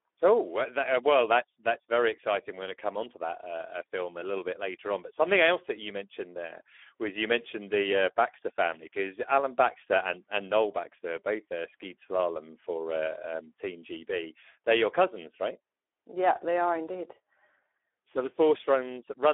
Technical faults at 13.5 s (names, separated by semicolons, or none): Speex codec